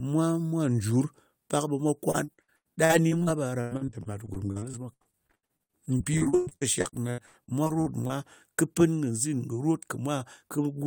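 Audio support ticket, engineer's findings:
Repeated packet loss (robotic sound), 2.11–8.11 s: choppy speech with dozens of short holes, longest 120 ms. Concealment keeps stretching the last bit of audio over each gap, so about 30% of that stretch is patched-in sound. Worth checking the network path.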